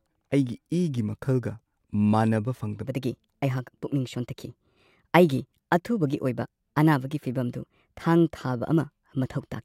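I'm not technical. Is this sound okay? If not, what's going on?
No. From 2.85 s to the end, this is a section at the wrong speed. The speech runs about 1.21 times faster than it was recorded, so it sounds hurried and the voice jumps up roughly three semitones at that point. Speed and pitch shift together because the audio is simply being played back too quickly, likely from an editor or player running it against the wrong clock.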